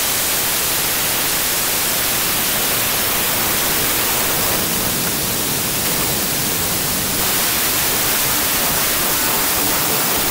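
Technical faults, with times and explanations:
Throughout: wrong sample width. The audio sounds like a loud wash of noise with the original sound buried inside it, running slow with its pitch lowered, which fits packed 24-bit samples being read as 16-bit integers. Each 16-bit read takes bytes from neighbouring 24-bit samples, so most values are assembled from mismatched high and low bytes and only some carry the true top bits. Because every three-byte sample is read as one and a half samples, playback runs at 0.667 times the original speed, and pitch drops with it.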